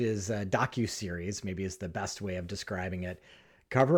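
Listening through the speech recording, nothing stood out.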